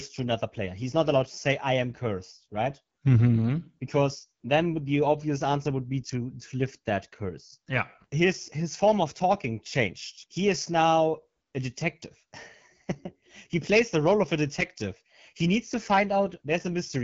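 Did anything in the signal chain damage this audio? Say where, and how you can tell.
Yes. The damage is at the codec stage: the speech passed through the AMR wideband (HD Voice) codec at a low rate, which fits the 8.85 kbit/s mode. Throughout, there is nothing above 7.3 kHz, and the pulse-driven vocal model, starved of bits, leaves the speech plainly rough and raspy.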